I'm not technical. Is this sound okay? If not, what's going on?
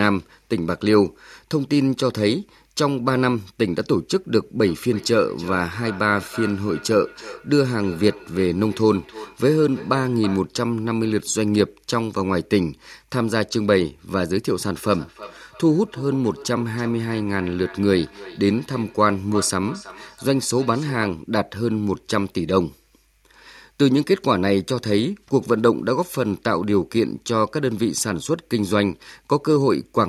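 No, there's a feedback echo between two devices from 4.56 to 10.52 s and again from 14.83 to 21.22 s. Two devices on the same call sit in one room, so each word comes back around every third of a second, quieter and thinner.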